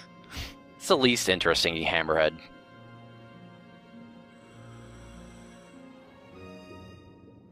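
No technical faults turn up anywhere in this one, so there's nothing to flag.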